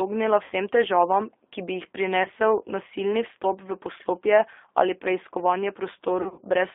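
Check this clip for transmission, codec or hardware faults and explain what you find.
Two faults are audible: low-bitrate codec damage throughout, and three short dropouts patched over by the decoder.

G.729 codec (throughout): the speech passes through a G.729A link at 8 kbit/s. The link confines the sound to roughly 300 Hz to 3.5 kHz, and its model-based coding leaves it plainly rough and synthetic.

VoIP packet loss concealed by the speech codec (0.44–0.52 s, before "težavam ki bi jih"; 2.23–2.28 s, between "težavam ki bi jih" and "nasilni vstop v poslopje"; 6.22–6.41 s, after "v poslopje ali preiskovanje"): audio went missing, about 60 ms, 20 ms and 120 ms, the last scattered in runs of up to 40 ms. The decoder stretched its last pitch and filter into fading fill, leaving the sound weak briefly afterwards.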